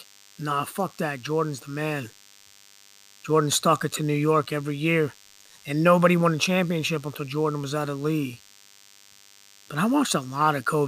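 A speech recording carries DECT cordless phone buzz for its whole length: a thin, steady 100 Hz buzz roughly 30 dB below the speech, from a nearby handset or base whose 10 ms radio bursts are rectified by the audio circuitry. A spectrogram shows evenly spaced horizontal harmonic lines at multiples of 100 Hz running unbroken across the clip.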